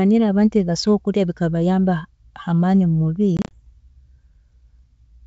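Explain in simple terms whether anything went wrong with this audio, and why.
Between 3.37 and 3.55 s the speech breaks up into a rapid stutter: several short, hard-edged gaps, none longer than about 30 ms, adding up to roughly 90 ms of missing sound, followed by slightly rough audio before it steadies. This is packet loss on an ADPCM call. About ten small chunks of data never arrived, and the receiving end, which predicts each sample from the last, briefly lost track of the sender until it caught up. The wideband G.722 coding itself sounds clear.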